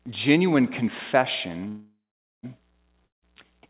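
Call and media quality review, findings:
Call audio freeze, 1.68–2.45 s: last sound stretched into a fading buzz, then about 0.48 s of silence. Resumes where it stopped, so nothing is lost and delay grows 0.75 s. Likely jitter-buffer underrun from held-up packets.

Long network dropout, 3.05–3.24 s: fading fill, then about 0.16 s of silence. Audio returns with about 0.18 s missing. Likely packet loss in transit. The G.711 path is band-limited, with nothing above 4 kHz.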